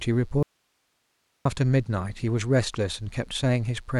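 A mains buzz at 60 Hz runs through the whole speech clip. It sits about 40 dB below the speech. Sharp switching spikes, twice per mains cycle, leak into the signal path. Their harmonics stack up into a steady, raspy buzz under everything.

From 0.43 s to 1.45 s there is an audio dropout to a faint residue. The speech cuts off abruptly for about 1.03 s. Only hiss remains, around 50 dB below normal level. The likely cause is a lost input while the downstream path stayed live.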